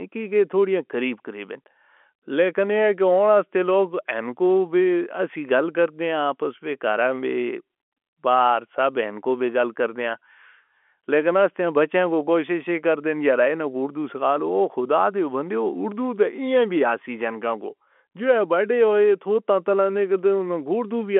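No technical faults occur at any point in this speech, so there is nothing to describe in time order.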